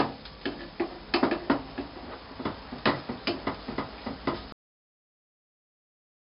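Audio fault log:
throughout: 4-bit ADPCM compression. Each sample is coded as a coarse 4-bit step away from a predicted value, with the step size adapting as the signal moves, which fits a rate of around 44 kbps. The rounding error becomes a heavy, gritty hiss that rises and falls with the loudness of the sound, and sharp attacks smear where the step cannot grow quickly enough. Nothing is present above 5.3 kHz, so the whole clip sounds dull and muffled as well as grainy.
4.52 s: cut-off end. The sound stops abruptly in mid-flow and drops straight to digital silence, which lasts for the remaining 1.7 s or so. There is no natural decay or fade because the final stretch of audio was never written out or played back. The signal simply ends where the data runs out, and the sound gives no hint of closing on its own.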